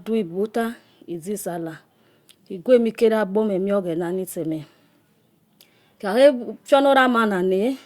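No technical faults occur at any point in the recording.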